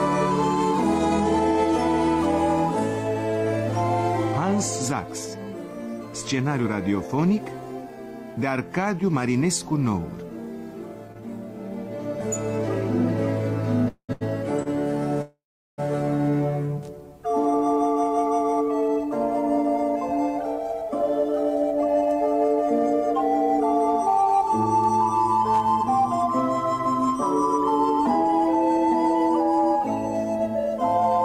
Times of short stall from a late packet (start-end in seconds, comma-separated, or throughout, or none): 14.13-14.23, 14.63-14.67